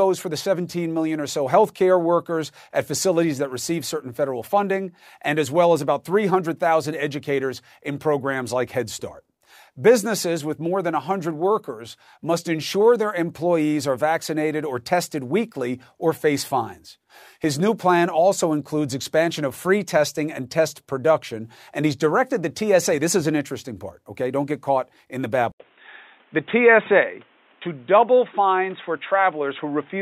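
At 25.52 s, just after "get caught in the", the input likely switched to a poorer device: an 80 ms gap, then dull speech with nothing above 3.8 kHz and faint new background noise to the end.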